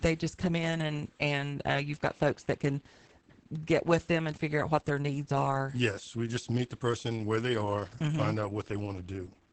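This is a speech clip with Opus voice compression damage throughout. Nothing is present above about 8.8 kHz, so the band is cut to wideband. The damage is heavy. The speech sounds muffled and hoarse, with a slightly robotic edge. That points to the SILK linear-prediction coder at a low bitrate, around 10 kbps, coding the excitation coarsely. The texture fits 20 ms frames.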